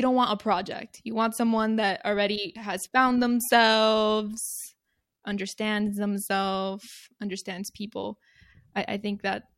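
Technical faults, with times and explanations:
No technical faults are audible in this speech.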